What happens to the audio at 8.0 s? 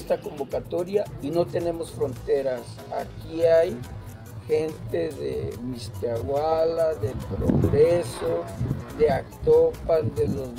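At 8.0 s you're inside a time-stretched section that kicks in at 2.12 s and runs to the end of the clip. The pace drops abruptly to about 0.65 times normal speed, yet the pitch stays put. That's likely software padding the audio out to a longer length by repeating short slices to hold the pitch steady, which is why everything there drags.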